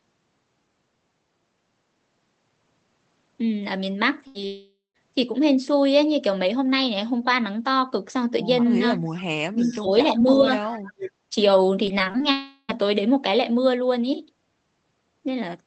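At 4.27 s a burst of packet loss cuts in for about 80 ms. The receiver stretches the last sound into a short buzz or hiss that fades before the audio resumes further on. On the spectrogram, the harmonics smear into flat horizontal lines, and the waveform shows a decaying, overly regular stretch.

At 4.47 s a long network dropout follows and lasts until 4.96 s, with about 480 ms missing. A held buzz or hiss fades away, and the last 130 ms are silent. This is likely a network outage. The spectrogram shows frozen bands dissolving into a blank column, and the waveform shrinks to a flat line before speech returns.

From 8.81 to 11.35 s there are stretches of speech suppressed in double talk, likely an echo canceller clamping down while both sides talked. The first is brief, at 8.81 to 9.01 s, with a shallow dip. The second runs from 9.51 to 10.57 s with a deep drop, nearly 20 dB. The third, from 10.79 to 11.14 s, is the deepest, around 30 dB. 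The last is a shallow dip at 11.30 s. The waveform envelope sags or chops in pieces, and the spectrogram thins, especially in its upper bands.

Among these stretches there is an echo leak. It lasts from 9.57 to 9.80 s and occurs again from 10.72 to 10.79 s. A faint copy of the voice trails 342 ms behind, at roughly 25 dB below the speech. The cause is likely uncancelled loudspeaker pickup. On the spectrogram, it shows as weak, ghostly repeats of earlier harmonic patterns.

Between 11.86 and 12.24 s, repeated packet loss gives a robotic sound. Seven short gaps, the longest 22 ms, are patched in turn. Together they cover about a quarter of that span. It sounds choppy, with pieces missing. The spectrogram shows striped, stuttering columns, and the waveform shows small repeated or flattened segments.

A second long network dropout runs from 12.31 to 12.71 s, with about 380 ms lost. Here the concealment keeps a fading buzz or hiss going for the whole stretch rather than falling silent. 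It looks like smeared, steady bands decaying on the spectrogram. Throughout the clip, the spectrogram content tops out near 8 kHz, which reflects the codec's bandwidth.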